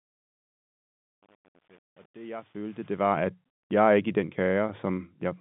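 Truncation distortion on the fade-in runs from 0.0 to 3.24 s: the quiet ramp breaks into coarse, undithered steps, consistent with 8-bit truncation, sounding gritty until "jeg er ikke i".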